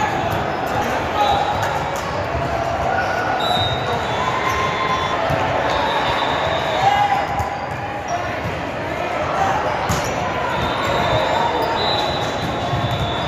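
At 0.81, 5.12, 8.07, 10.03 and 11.76 s the audio jumps forward, the sign of compressed frames skipped. Whole frames never reach playback, so roughly half a second vanishes at the first jump, somewhat less at the second, and only a fraction of a second at each later one. The skips are whole multiples of a step that fits a 26 ms frame. Unlike a dropout, there is no silent gap; the audio simply jumps ahead at each join.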